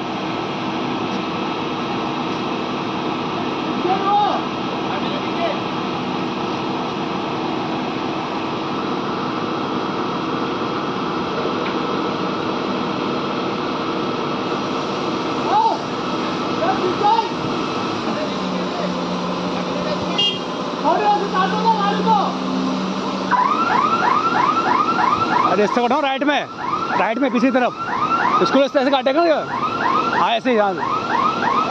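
No technical faults can be heard in this audio.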